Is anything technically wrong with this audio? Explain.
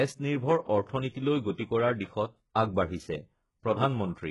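Yes. Throughout, the speech has gritty, lispy sibilants and treble that sounds copied rather than real, with nothing above 11.4 kHz. That's likely HE-AAC compression at a very low bitrate, rebuilding the top end from lower bands.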